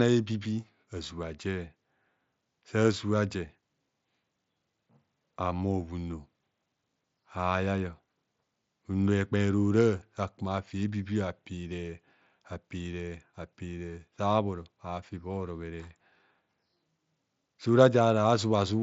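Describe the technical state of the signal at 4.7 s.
At 4.7 s the signal is intact, with no fault present, the speech carried through the Bluetooth mSBC headset codec with its usual wideband limit of about 7.7 kHz.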